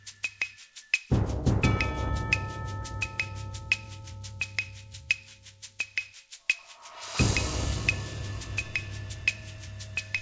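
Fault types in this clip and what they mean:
No faults are audible in these sounds.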